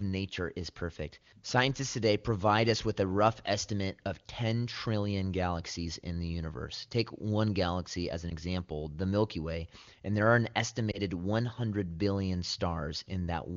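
Right after "and there are an", from 10.92 to 11.00 s, the speech briefly dips and warbles before recovering: a lost AMR speech frame, consistent with one 20 ms frame failing its checksum, concealed by the AMR wideband decoder replaying previous pitch and vocal-tract settings at lowered gain.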